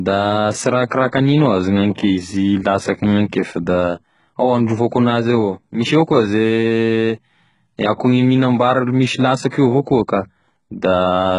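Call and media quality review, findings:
HE-AAC compression, whole clip: likely a very low bitrate link, around 12 kbps. Treble is rebuilt from lower bands and stops near 11.1 kHz, so s sounds come out gritty and lispy.

Pre-echo, 9.49 to 9.52 s: the transform codec spread quantisation noise across its block, so about 39 ms of hiss runs ahead of a sharp attack and softens it.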